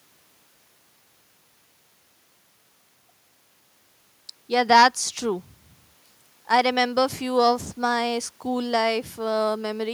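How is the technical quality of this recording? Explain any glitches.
The recording has no technical glitches to explain. Nothing in the speech points to any fault in how it was captured, processed or carried.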